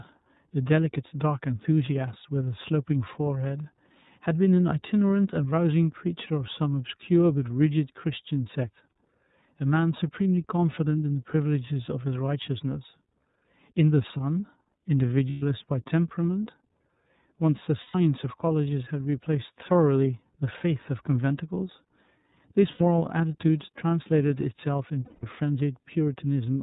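The whole clip runs through the iLBC codec: band-limited to 4 kHz, with a rough, slightly synthetic edge that fits its 13.33 kbps mode with 30 ms frames. Lost iLBC frames then turn up at 15.3–15.43, 17.81–17.95, 22.71–22.81 and 25.05–25.24 s, each a brief buzzy, held-vowel smear where the decoder repeats the last pitch cycle, then snaps back cleanly.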